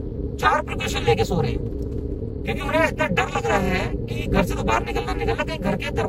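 From start to finish the clip carries overlap-add ripple. The signal was split into windowed frames and reassembled with an overlap whose windows do not sum to a flat gain, so the level dips and recovers once per frame. Here the modulation runs at around 300 Hz and swings by about 60 dB, which nearly silences the audio at each trough. The result is a harsh, buzzy, robotic roughness laid over all of the sound rather than a slow tremolo.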